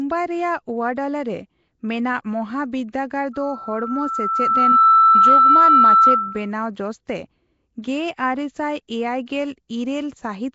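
Throughout, the speech carries a rough, hissy, underwater smear with nothing above 7.7 kHz, likely Nellymoser compression at a rate that fits 32 kbps; unlike plain low-pass filtering, empty bands are noise-filled. From 3.33 to 6.51 s, a loudspeaker feedback squeal at 1.3 kHz swells over roughly a second and a half to about 15 dB above the speech. It is a single self-sustaining tone that builds up, not a steady hum or a brief whistle.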